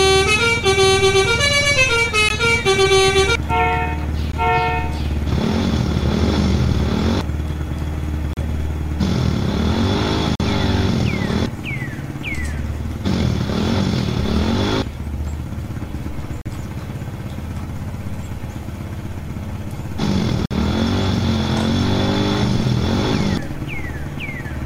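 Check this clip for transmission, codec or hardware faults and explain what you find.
Yep, one kind of fault, repeated: gaps between stream segments. Short silent holes with hard edges land at 2.29, 4.32, 8.33, 10.35, 16.41 and 20.46 s. They fall on a 2-second segment grid, where timestamps leave 15 to 51 ms uncovered and the player pads it with silence. Nothing's lost, just hard-edged dropouts.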